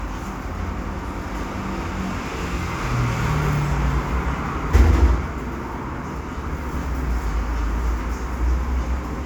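No technical faults can be heard anywhere in this recording of sounds.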